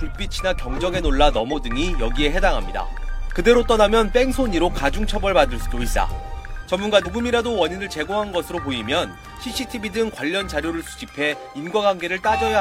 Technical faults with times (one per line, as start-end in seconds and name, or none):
1.49-1.55 compressed frames skipped
5.90-5.96 compressed frames skipped
7.02-7.07 compressed frames skipped